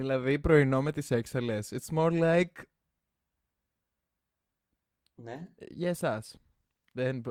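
Nothing in this speech recording stood out as a technical problem on listening.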